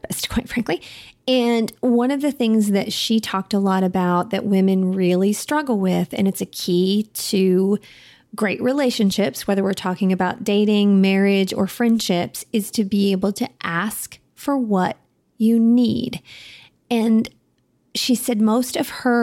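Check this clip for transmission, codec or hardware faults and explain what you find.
Nothing stood out on listening to this speech recording.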